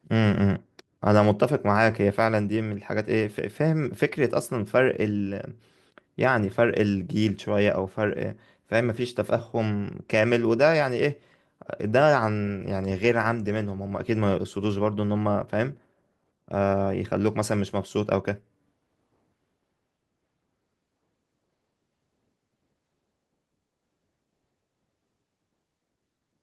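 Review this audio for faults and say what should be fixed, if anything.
Nothing needs to be fixed, as there are no faults in this audio.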